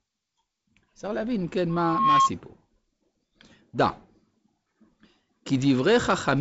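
From 1.69 to 2.31 s, a microphone picks up the loudspeaker it feeds and the loop gain tops one at 1.1 kHz, causing loudspeaker feedback squeal: a single tone that swells over roughly 0.4 s to about 5 dB above the speech.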